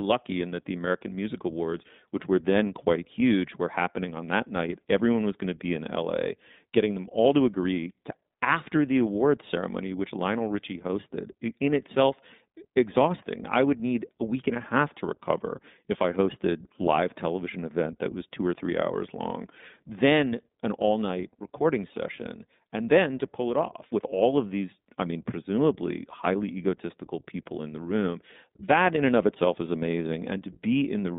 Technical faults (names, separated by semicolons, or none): iLBC codec